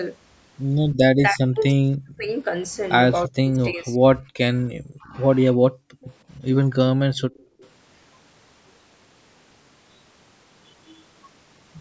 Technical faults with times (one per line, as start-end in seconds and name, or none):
1.12-2.29 speech suppressed in double talk
3.27-5.16 speech suppressed in double talk
5.54-5.59 speech suppressed in double talk
5.87-6.01 background gated by the echo canceller
6.01-6.06 echo leak
7.19-7.66 echo leak
7.46-7.61 background gated by the echo canceller